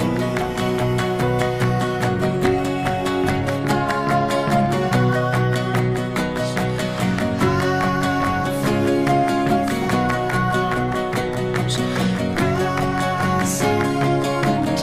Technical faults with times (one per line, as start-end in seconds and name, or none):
none